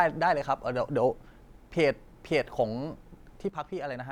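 At 3.49 s the speech abruptly drops by about 6 dB and stays at that lower level until the clip ends at 4.11 s. There is no fade or ramp. The level steps straight down and holds. This is likely one channel dropping out. With one side of the stereo pair gone, the material common to both channels loses half its contribution in the mono sum, which accounts for the sudden 6 dB fall.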